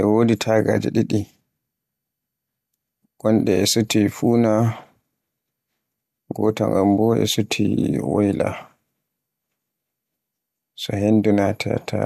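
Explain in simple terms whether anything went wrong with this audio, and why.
Nothing went wrong with this audio; no technical fault can be heard anywhere in the speech recording. There is nothing to point to and nothing that needs explaining.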